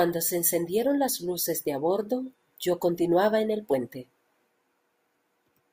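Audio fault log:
Nothing stood out on listening to this speech clip.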